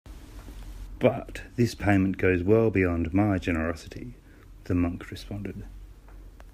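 No technical faults occur anywhere in the recording, so there is nothing to describe in time order.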